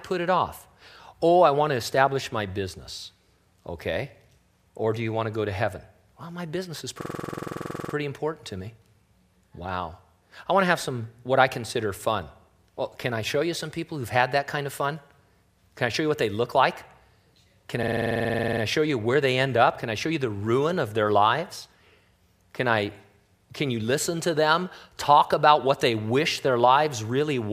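A system hang loop strikes twice: the driver stalled while the hardware replayed one 46 ms buffer, which fits 2048 samples. From 7.01 to 7.94 s, after "my business is", and 17.83 to 18.62 s, before "show you where they", sound stutters rapidly at 21.5 Hz.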